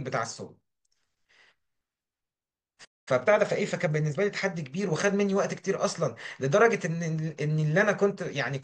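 At 2.84 s the speech cuts out in mid-flow. Silence holds until 3.08 s, a gap of about 0.22 s. This is a playback stall. The player most likely ran short of data, or its output thread was held up, so nothing reached the output until it recovered. The sound then resumes. The break lands in the middle of the speech rather than at a natural pause.

From 3.08 s to 4.52 s the speech is hurried. This is time-compressed catch-up. Having fallen behind, the player trims its backlog by dropping small slices of audio and cross-fading the joins. Here the speech runs at about 1.15 times normal speed, while the pitch stays unchanged. After 4.52 s the pace returns to normal.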